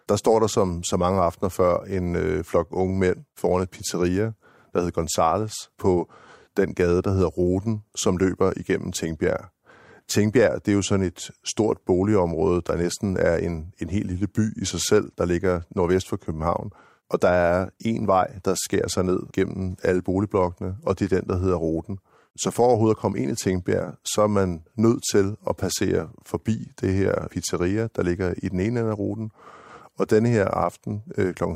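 No technical faults are audible.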